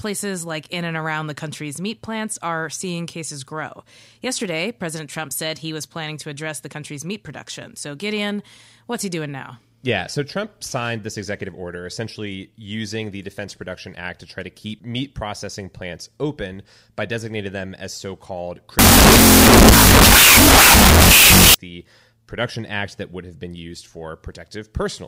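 From 18.79 to 21.54 s, a wrong sample width, which fits 16-bit data read as unsigned 8-bit, buries the sound in loud noise, at half speed.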